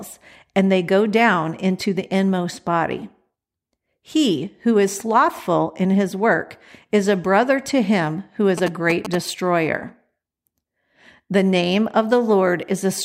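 From 8.58 to 9.15 s, right after "to him who is", a galloping dit-dit-dit of short buzzes at a 217 Hz rate cuts in, roughly 10 dB under the speech. These are GSM signalling bursts: a nearby 2G phone's short radio transmissions rectified by the audio circuitry.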